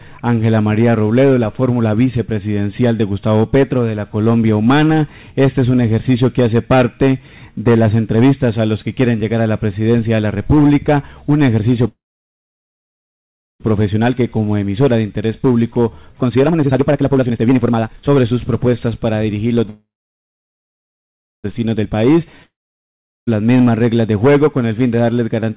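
At 11.88 s the sound fades out and leaves about 1.6 s of silence before resuming at 13.62 s, picking up exactly where it left off with nothing skipped. This is a call audio freeze: packets were likely held up in transit, the jitter buffer ran dry, and the receiver stretched the last fragment briefly before going quiet. The result is a 1.72 s pause inserted into the audio and an equal increase in delay.

From 16.22 s to 19.57 s the audio races at 148% of normal speed while the pitch stays put, so everything sounds rushed. This is jitter buffer speed-up. With the buffer overfull, the receiver cut many pitch-period-sized slices in a row, trimming roughly one and a half seconds of backlog.

A second call audio freeze follows at 19.70 s. Again the sound drops to silence for about 1.57 s and resumes intact at 21.46 s, adding 1.74 s of delay. A much milder speed-up comes right after, from 21.65 s to 21.91 s at 113%. 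It removes only a few hundredths of a second.

At 22.43 s a long network dropout begins. A brief fading smear of the last sound gives way to about 0.76 s of silence. When the audio returns at 23.29 s it has jumped ahead, because the 0.86 s that went missing, likely never delivered, is gone for good.

Throughout, nothing sits above 4 kHz, which fits G.711 mu-law at 64 kbps on the call path.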